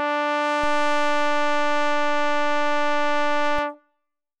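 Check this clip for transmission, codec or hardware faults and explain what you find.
There is one fault in this music clip, a DC step. At 0.64 s the waveform's zero line jumps by about -24 dBFS, as if an offset input were switched in, and holds until 3.59 s, when it steps back. Each jump lands as a low thump, while the music itself carries on unchanged.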